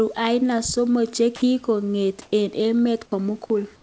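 At 1.36 to 1.42 s, 60 ms of speech gives way to flat, steady hiss. This is sound dropped by the voice detector, likely because quiet speech was judged to be background and replaced with comfort noise. On a spectrogram the speech harmonics stop abruptly and a smooth, even band of noise takes over.

From 2.22 to 2.32 s, comfort noise replaces the background. The real room noise, about 38 dB below the loud parts, turns into featureless synthetic hiss for 100 ms, and its level shifts by about 6 dB, likely because transmission paused during the silence. The waveform shows a small step in the noise floor, and the spectrogram loses the background's texture.

At 3.06 to 3.12 s, the voice detector drops sound again, cutting about 40 ms of speech inside a 60 ms stretch of smooth noise. The spectrogram shows the speech energy breaking off into uniform noise and returning, all below the 8 kHz ceiling of the call path.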